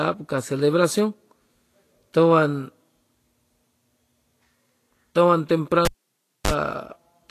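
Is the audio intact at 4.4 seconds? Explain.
No. At 4.4 seconds, as throughout the clip, the speech is hissy and grainy, with nothing above 14.1 kHz. This is likely Vorbis compression at a low bitrate, around 34 kbps: coarsely quantised treble turns into noise of similar energy, unlike a simple low-pass filter, which would only dull the sound.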